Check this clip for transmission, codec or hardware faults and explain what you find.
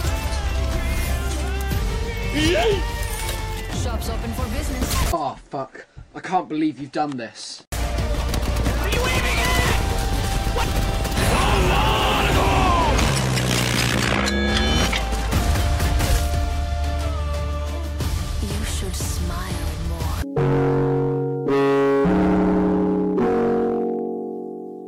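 Listening through the audio turns up no transmission, codec or hardware faults at any point.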